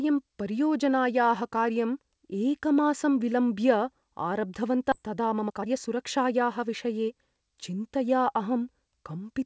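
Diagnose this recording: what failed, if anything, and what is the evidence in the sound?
At 4.92 s the audio jumps forward with no gap or fill: a skip ahead. Roughly 0.7 s of material is missing, and the two sides are spliced almost directly, so the sound lurches rather than pausing. This is a network and jitter-buffer fault: a run of audio was lost in transit or discarded when the buffer overflowed while later packets were already queued. Playout resumed from the newest available data, cutting the latency by about the same 0.7 s.

From 5.02 s to 7.38 s the sound runs fast, about 113% of normal rate, with pitch unchanged, so it comes across as hurried rather than raised. This is jitter buffer speed-up. The buffer was holding more audio than its target, as when delayed packets arrive together, and the receiver repeatedly removed short segments of one or a few pitch periods to reduce delay. 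Around a third of a second was trimmed this way. The G.722 call path at 64 kbps, with nothing above 8 kHz, accounts for the band-limited character throughout.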